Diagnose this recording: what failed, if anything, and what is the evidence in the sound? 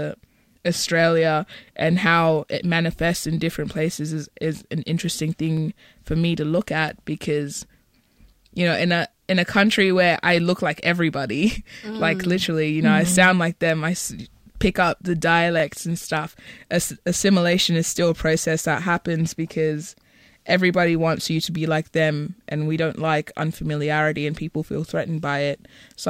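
Overlapping chunks, at the buffer or chunked-processing stage. Brief stutters are heard in the speech at 5.57–5.60 s, 15.60–15.62 s and 25.62–25.65 s, about 10 s apart. Each new 10 s chunk starts about 25 ms early, so that slice of audio plays twice at every join.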